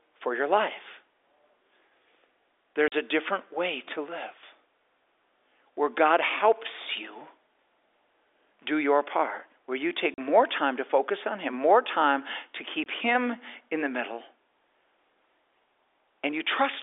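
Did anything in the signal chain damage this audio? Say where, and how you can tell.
Yes. Packet loss filled with silence on the network path: packets went missing and the receiver played silence in their place instead of concealing the gaps. There are three dropouts: a 40 ms hole at 2.88 s just before "a different way to", another 40 ms at 10.14 s between "part where you take" and "time to focus on", and a 20 ms hole at 12.84 s right after "more time to". The lengths step in 20 ms units, which fits 20 ms packets over the G.711 telephone link. The cut to silence and back is abrupt, with hard edges.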